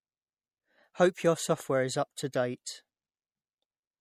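The speech was likely squeezed through MP3 compression at a low bitrate, consistent with about 64 kbps, and the damage is plainly audible throughout. Nothing remains above 18.8 kHz, and weak spectral detail flickers between frames, giving the speech a watery, swirling texture.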